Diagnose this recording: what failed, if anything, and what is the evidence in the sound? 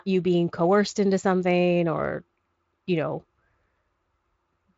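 No fault detected.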